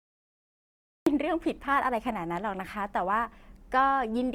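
For the first 1.07 s there is dead digital silence, and then the speech appears abruptly, already mid-sound, with no natural attack or fade-in to ease it in. This is a cut-off start: capture or streaming began late, so the opening of the utterance was never recorded, and the audio jumps straight from silence into speech that was already in progress at 1.07 s.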